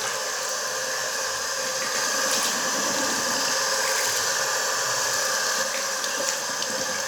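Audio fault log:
1.95–5.63 s, doubled audio track: a second, full-band copy of the sound trails the original by around a tenth of a second at roughly equal level, likely a duplicate capture or misaligned edit. The waveform shows every transient repeated, with no decay, and the copy starts and stops abruptly.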